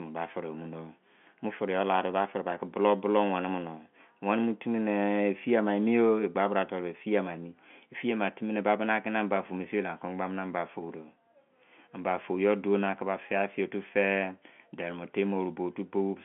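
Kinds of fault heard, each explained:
The speech comes through the narrow band of G.711 telephone coding, from 150 Hz to 3.4 kHz with nothing above 3.8 kHz, and the sound holds steady at what that line format delivers.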